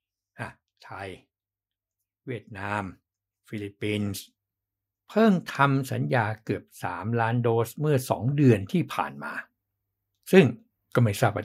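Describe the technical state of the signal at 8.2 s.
At 8.2 s the speech signal is intact, with no audible fault at that moment.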